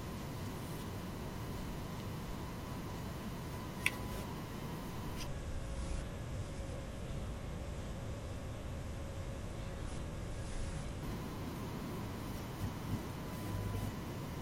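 From 5.27 s to 11.03 s there's a section at the wrong speed. The speech suddenly drops to roughly half pace, running at 0.546 times normal, and because speed and pitch move together it sinks by around ten semitones, so the talker sounds deep, dragging and a bit sluggish until it snaps back at 11.03 s. That's likely a playback or edit step reading this stretch against the wrong clock rate.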